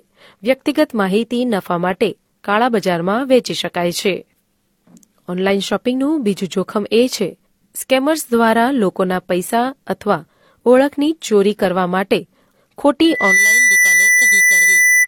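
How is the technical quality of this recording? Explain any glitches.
The recording has one clear fault, a loudspeaker feedback squeal near the end. From 13.04 s until 15.07 s, a single steady tone at 2 kHz rises out of the speech within about a third of a second and then holds, sitting about 5 dB above the speech. It happens because a microphone picks up the loudspeaker it feeds, and at 2 kHz the gain around that loop exceeds one, so the tone keeps reinforcing itself until the loop is broken or the amplifier limits it.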